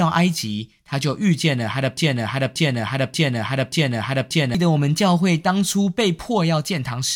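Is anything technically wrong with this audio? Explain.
Yes, there's a broken-record loop in this speech. From about 1.98 s to 4.55 s, a 0.58 s fragment plays four times back to back, identical each time, so the speech stutters in place instead of moving forward. What's happening is most likely a stall somewhere in the player, encoder or stream, which kept re-sending the last chunk it had buffered. Whatever should have been heard in those two and a half seconds is simply gone.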